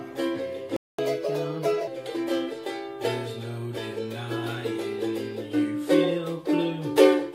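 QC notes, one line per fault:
0.76–0.99 s, playback stall: The player's output path halted for about 0.22 s, most likely because its buffer ran dry or its audio thread was held up and had nothing to hand to the output. The sound breaks off mid-flow into a clean stretch of silence, long enough to register as a hiccup rather than a click. When output resumes, the audio picks up from the point where it stopped.
0.99–1.87 s, catch-up at higher speed: Having fallen behind during the stall, the player drains its backlog by resampling the queued audio at 1.25 times normal speed. Because resampling changes speed and pitch together, this stretch sounds hurried and raised by roughly four semitones, giving a thin, sped-up quality. Once the lost time is recovered at 1.87 s, the rate drops back to 1.0 and pitch returns to normal.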